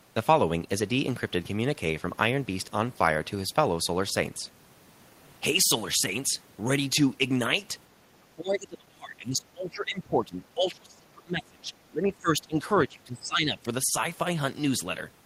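Speech suppressed in double talk, 8.2–11.7 s, 11.9–12.65 s and 12.86–13.65 s: the speech dips by up to about 30 dB, likely because an echo canceller mistook overlapping talk for echo.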